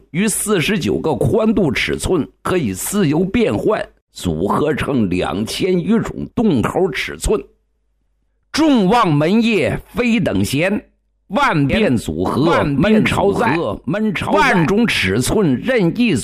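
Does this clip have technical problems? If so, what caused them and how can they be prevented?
Yes. From 11.70 to 14.68 s there is a doubled audio track: a dry, full-band copy trails the original by about a second, roughly 5 dB quieter, starting and stopping abruptly. The likely cause is a duplicate capture path or misaligned edit. Prevent it by monitoring only one input route and checking edits for overlapping copies.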